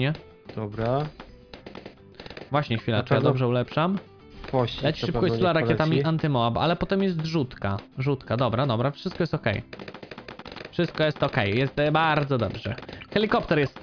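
No technical faults can be heard anywhere in the audio, and the signal stays continuous and stable throughout.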